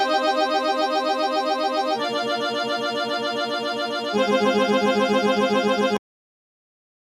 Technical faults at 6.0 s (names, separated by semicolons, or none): noise suppressor applied to music or sounds; cut-off end